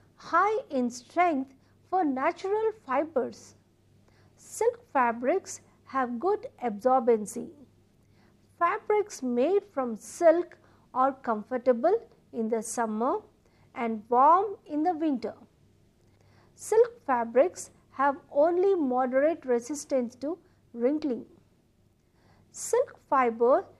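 Nothing technically wrong is audible anywhere in this audio.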